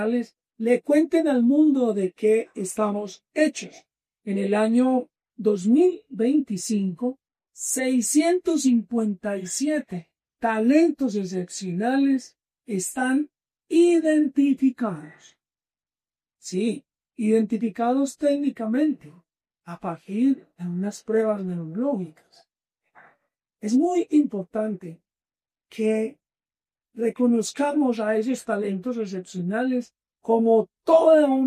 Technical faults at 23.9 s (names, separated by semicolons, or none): none